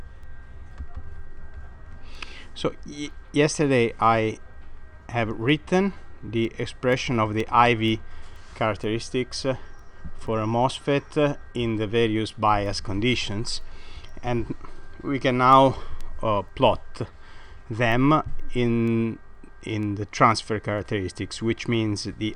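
From 0.23 s to 22.22 s, word clock ticks recur about every half second: an unlocked digital receiver, roughly 40 ppm off, slips one sample, producing sharp clicks.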